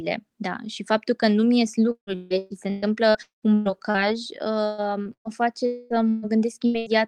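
From 1.91 to 3.97 s, repeated packet loss (robotic sound) chops the speech through eight gaps, the longest about 196 ms. Nearly half of that span is patched with repeated sound, which shows on a spectrogram as smeared, stretched frames between short intact slices. The same choppy pattern returns from 4.66 to 5.32 s with four gaps. Between 5.66 and 5.93 s the sound turns into a held, decaying buzz or hiss with no silence, most likely a long network dropout. On the waveform it appears as a smooth, shrinking envelope. Bursts of packet loss follow at 6.10 to 6.25 s, 6.66 to 6.77 s and 6.78 to 6.89 s. Each replaces about 80 to 120 ms with a fading continuation, so the spectrogram shows the last sound frozen and then dimming.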